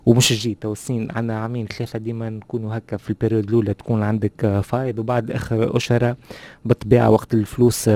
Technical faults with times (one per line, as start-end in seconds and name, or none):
none